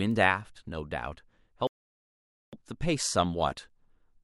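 Word clock ticks run from 0.11 s to the end of the speech, about every half second. A receiver clocked independently of its digital source drifts by some 40 parts per million, so one sample is periodically dropped or repeated, giving sharp ticks of uneven strength.

A playback stall silences the audio from 1.67 s to 2.53 s, a gap of about 0.86 s, before the speech resumes. The likely cause is the player running short of buffered data or its thread being blocked until output could restart.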